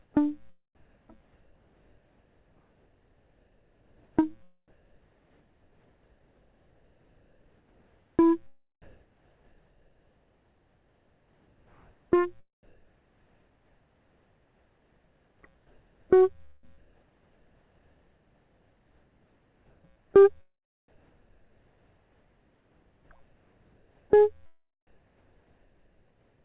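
The music opens with comfort noise in place of the background. From 0.02 to 0.14 s, the quiet bed, about 44 dB below the loud passages, becomes a flat, featureless hiss. That hiss is about 4 dB quieter than the real background. The likely cause is discontinuous transmission. The sender stopped sending, and the receiver made up noise to fill the 120 ms gap. The same thing happens from 0.75 to 8.24 s, with about 6.8 s of detail swapped for steady synthetic noise.

From 8.82 to 20.14 s, the sound is chopped by the voice detector. The detector likely kept switching between sending and not sending. About 10 s in total is lost to fill. Quiet notes and note edges drop out. All through the clip, nothing is heard above 4 kHz, which fits the G.711 call codec.

Comfort noise returns from 23.23 to 24.10 s and from 24.87 to 26.44 s. Each time, a background about 46 dB below the loud parts turns smooth and lifeless. 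The level holds steady. Only the texture changes.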